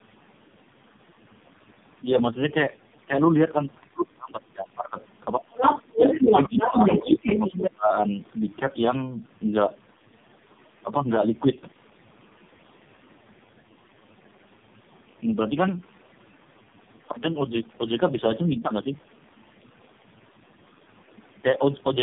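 The whole 22-second clip carries tandem speech coding. It sounds rough, muffled and a bit warbly, with nothing above 3.6 kHz. That fits the call being decoded and re-encoded through three low-rate speech codecs in a row, each one degrading what the previous one left, with the last probably AMR-NB at a low rate.

From 5.52 to 5.82 s there's a short burst of a second voice, likely the other side's voice leaking through after the echo canceller missed some loudspeaker pickup. It comes in about 5 dB louder than the main talker.

Right after that, the talker gets speech suppressed in double talk, probably because the canceller ducked everything while both sides were active. Level dips by around 10 dB at 5.93–6.3 s and again at 6.48–7.27 s, then drops much deeper, nearly out, at 7.51–7.91 s.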